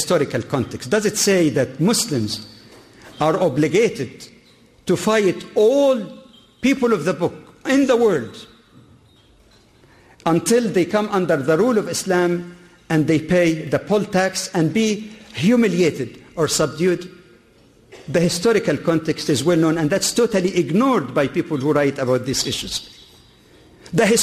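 No technical faults can be heard anywhere in this audio.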